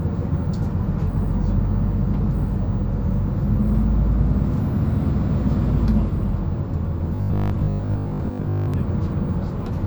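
Robotic sound from repeated short buffers runs from 7.16 to 8.74 s. The sound hardens into a rigid, metallic buzz at 50 Hz. The likely cause is audio arriving too seldom, so a 20 ms stretch is replayed over most of the real signal.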